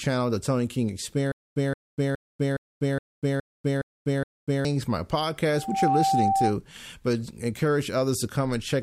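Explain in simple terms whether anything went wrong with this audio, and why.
Two things went wrong in this speech clip.

First, from 1.32 to 4.65 seconds there is a stutter with silent gaps. The playback most likely stalled, and each time it tried to resume it replayed the last bit of audio and then ran out. You hear the same short burst, about 0.17 seconds long, eight times over, each followed by about a quarter second of dead silence. It repeats steadily every 0.42 seconds. Whatever should have played during that stretch is gone.

Second, from 5.52 to 6.56 seconds there is loudspeaker feedback squeal. A microphone picked up the loudspeaker it was feeding, and the sound kept looping back and getting louder at one pitch, 777 Hz. Over roughly a third of a second that single tone swells into a squeal that ends up louder than the speech itself.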